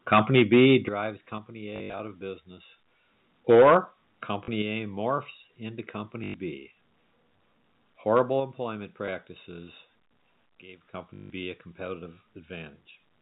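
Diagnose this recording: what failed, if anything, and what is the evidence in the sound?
Microphone overload at the converter stage is the likely cause of the harsh crackle from 0.12 to 0.76 s, 3.49 to 3.77 s and 8.14 to 8.21 s. The input is driven about 10 dB, about 8 dB and about 3 dB past full scale, so the loudest peaks are sheared flat. A small share of samples is affected in the first and last spans and a much larger share around 3.6 s. On the waveform the peaks show as flat-topped plateaus. On a spectrogram, broadband splatter climbs toward the top of the telephone band.

Microphone volume stepped down in the call processing is the likely reason the speech and background drop together in single steps at 0.39 s (about 2 dB), 1.38 s (about 4 dB), 3.55 s (about 2 dB), 4.62 s (about 5 dB) and 8.40 s (about 4 dB). The steps at 0.39 s and 3.55 s fall inside clipped passages. The one at 8.40 s follows the last overload. 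On the waveform the envelope narrows abruptly, and on a spectrogram every band dims at once.

Packet loss with the last packet repeated happens on the network, with concealment at the receiver. It gives robotic stutters at 1.76 to 2.00 s (160 ms missing across 240 ms, the longest run 80 ms), 4.44 to 4.48 s (40 ms), 6.24 to 6.34 s (100 ms) and 11.14 to 11.30 s (160 ms), and a small blip at 9.06 to 9.08 s (20 ms). The repeated segments buzz at a rate that fits 20 ms packets. On a spectrogram they appear as identical repeating blocks, all under the 4 kHz ceiling of the G.711 telephone coding.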